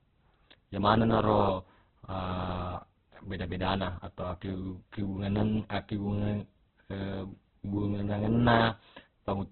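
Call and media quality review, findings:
Speech muffled and grainy for the full clip. Nothing above about 4.5 kHz. Tonal parts rough and noisy. Likely Opus compression at a very low bitrate, near 8 kbps, in CELT mode with narrowband output. Bits too scarce, so upper bands are dropped and the remaining bands get coarse noise-like fill. Heavy codec damage.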